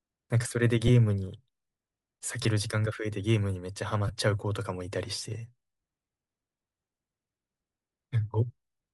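From start to end, the speech has a breathy, grainy edge with a thin, noisy top. This likely comes from Bluetooth LC3 compression at around 48 kbps.

Lost LE Audio frames occur at 0.87–0.90 s, 2.43–2.45 s and 4.08–4.13 s. Each gap fits two or three missing 7.5 ms frames. The decoder repeats the last spectrum, so each gap sounds like a brief noisy smear.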